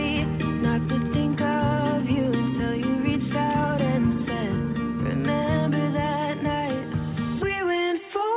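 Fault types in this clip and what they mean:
No technical faults detected.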